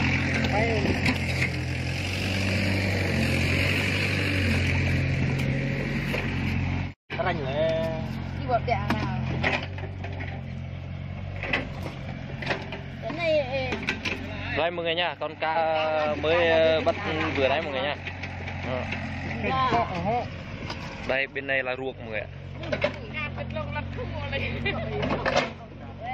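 At 15.55 to 15.57 s there is damaged data in the compressed stream. Corrupted bytes make the decoder lose frame sync, causing a brief glitch.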